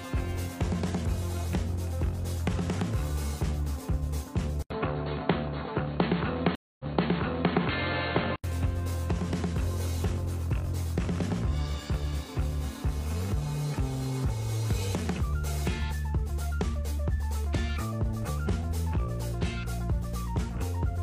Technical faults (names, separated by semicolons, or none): input switched to a poorer device; stream reconnect